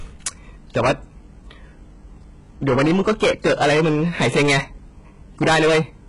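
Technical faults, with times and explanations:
Throughout, HE-AAC compression: the speech has a metallic top end, with s sounds turning gritty and lispy, and nothing at all above about 11.1 kHz. That's likely HE-AAC at a very low rate, which fits something around 12 kbps. The codec keeps only the lower band properly and fakes the treble by copying lower bands upward under a coarse envelope. Those copied harmonics don't line up with the real ones, hence the metallic edge on sibilants.
0.26–0.28 s, 0.76–0.92 s, 2.67–4.59 s and 5.42–5.80 s, hard clipping: the peaks are driven past the ceiling by about 11, 14, 19 and 21 dB respectively, so the waveform gets sliced flat. Those flat tops spray harmonics high up the spectrum. The first two are short crackly bursts. The long stretch from 2.67 s and the final one, pushed hardest, turn into a harsh, continuous fuzz on every loud syllable.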